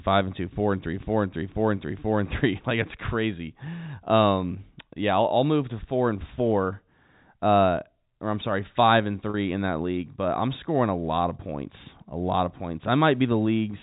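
Packet loss with pitch repetition at 9.30 to 9.34 s: about 40 ms of the telephone-band speech went missing, which points to two lost 20 ms packets. The receiver filled the gap by repeating the last pitch cycle, leaving a brief, slightly held buzz.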